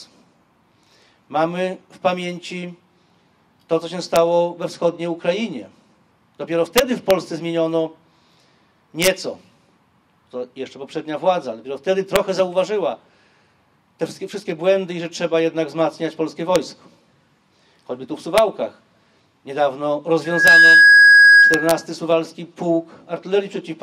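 Violent, sharp cracks at 4.16 s, far harsher than clipping, are integer overflow: loud peaks exceeded the largest integer and wrapped to the opposite sign instead of being limited. From 4.74 to 5.56 s the treble dulls and gritty noise rises. This is a Bluetooth SBC bit pool drop, consistent with the bit pool falling from 31 to 16, near 110 kbps, so the upper sub-bands starve. The same overflow cracks recur at 6.78 to 7.11 s, 9.03 to 9.07 s, 12.16 s, 16.56 s and 18.38 s. From 20.24 to 21.86 s a 1.6 kHz tone swells within about a third of a second to roughly 10 dB above the sound. This is loudspeaker feedback squeal: the microphone picks up its own loudspeaker and the loop gain at that frequency exceeds one. Overflow cracks also break through during the squeal, at 20.48 s and from 21.54 to 21.71 s.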